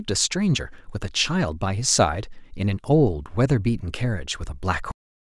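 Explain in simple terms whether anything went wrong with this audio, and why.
The speech stops abruptly at 4.92 s, in the middle of a sound, and the rest of the clip is dead silence with no fade or natural trailing off. This is a cut-off end. The final stretch of audio was never written out or played, so the recording simply ends where that data ran out rather than where the speaker finished. The missing part is roughly the last half second.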